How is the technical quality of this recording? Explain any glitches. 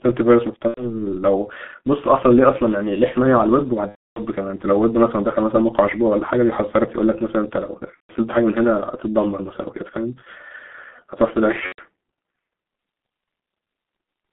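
Technical quality is poor: the speech is heavily coded and has four dropouts.

G.723.1 codec, throughout: the audio is confined to roughly 200 Hz to 3.5 kHz. Its muffled, hoarse sound and smeared consonants fit a low-rate codec of about 6 kbit/s.

VoIP packet loss concealed by the speech codec, at 0.68–0.92 s, 3.89–4.22 s, 7.94–8.15 s and 11.66–11.81 s: the decoder extrapolates missing audio from its last state, producing a brief fading smear that goes silent from the third lost frame, in gaps of about 90, 270, 150 and 120 ms.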